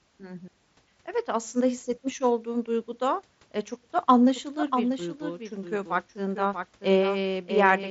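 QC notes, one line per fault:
4.35 s onward, doubled audio track: after "duyguda e çok da", a dry copy roughly 0.7 s late, about 5 dB quieter, cuts in abruptly; the waveform shows offset, repeated envelopes, likely from a second capture path.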